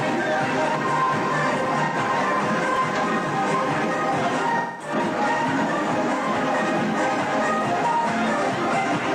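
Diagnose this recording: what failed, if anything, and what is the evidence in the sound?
AAC frame loss with concealment, at the codec stage, appears at 1.84 to 1.96 s, 4.57 to 4.94 s and 8.80 to 8.86 s. The two shorter gaps sound like a smeared, noisy or phasey patch. The lost spans of about 85, 213 and 43 ms are whole multiples of roughly 43 ms, which points to whole AAC frames going missing. The decoder filled each gap by reusing the last good spectrum with scrambled signs or interpolated energy.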